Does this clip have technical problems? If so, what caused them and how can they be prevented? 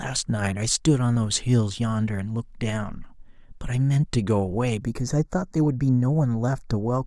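Yes. From 4.83 s to the end, channel delay causes comb filtering: one channel lags by roughly 0.15 ms, and the mono sum cancels near 3 kHz and its odd multiples, giving a hollow tone. Keep channels sample-aligned before any mono fold-down.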